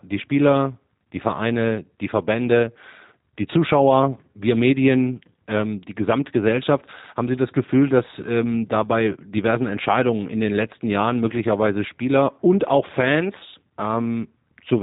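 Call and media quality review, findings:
G.729 codec damage, whole clip, plainly audible. Speech band-limited with nothing above about 3.8 kHz; rough, slightly synthetic timbre, consistent with a low-rate CELP voice path, likely the G.729A variant at 8 kbit/s. Probable component: VoIP codec leg. Mechanism: speech rebuilt each 10 ms frame from a vocal tract filter, pitch predictor and sparse pulses, so fine detail and upper band are lost.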